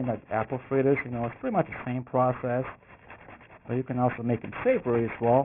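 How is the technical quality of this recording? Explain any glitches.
The recording suffers from aliasing throughout. The audio was resampled down without an anti-alias filter, so content above the fold at 3 kHz reflects back as false, unrelated tones, which points to a rate of about 6 kHz. The folded energy sits only around 15 dB below the signal, giving a gritty, metallic edge and a spectrum that runs hard up to the band limit.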